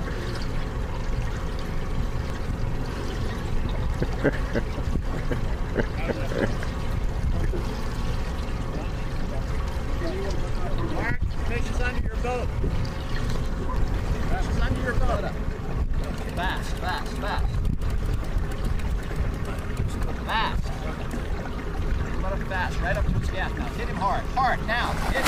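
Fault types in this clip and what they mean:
Compressed frames skipped: at about 2.30 s the audio jumps forward, leaving out roughly a tenth of a second. What's happening is that whole frames of the compressed stream never get played, either because they're missing from the file or because the decoder threw them out as damaged. The sound simply picks up again further along, so you hear a small discontinuity at the join rather than a gap of silence.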